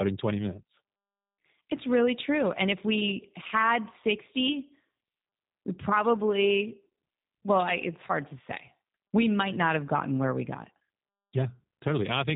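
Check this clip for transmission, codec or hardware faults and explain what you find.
One fault runs through the whole recording: G.729 codec damage, plainly audible from start to finish. The codec models each 10 ms frame with a vocal tract filter, a pitch predictor and a handful of pulses, then resynthesises the speech. Nothing above 3.8 kHz survives, so the top end sounds dull and boxed-in, and the rebuilt excitation gives the speech a slightly rough, synthetic edge. The coding artefacts point to a low-rate stream of around 8 kbit/s.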